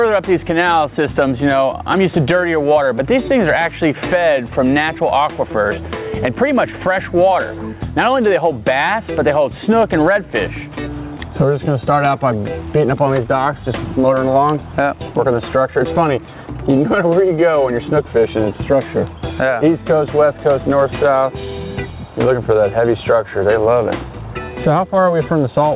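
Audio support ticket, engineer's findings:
Gain pumping throughout the clip: level swings around 10 dB, loud and soft parts closer in level, sound squashed. Likely input gain too high with a fast limiter. Unlike slow AGC drift, the swings follow each loud sound. Band ends near 4 kHz, consistent with a G.711 narrowband call path.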